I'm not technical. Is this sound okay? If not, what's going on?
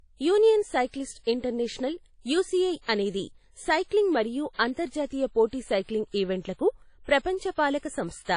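No. The speech was most likely squeezed through a low-quality WMA compression, a method that shrinks audio files by throwing away detail. Here the damage is plainly audible across the whole clip. Everything above 10 kHz has been cut away, so the speech sounds dull at the top. Around the words there's a ringing, washy smear, and a hiss that swells and fades along with the speech.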